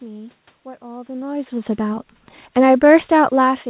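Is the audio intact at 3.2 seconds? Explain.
Yes, the audio is intact at 3.2 seconds, with the speech passing cleanly through the call path at that point and no fault to be heard there.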